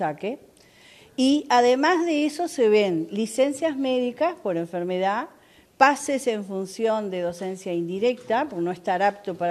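No technical faults are audible anywhere in the clip.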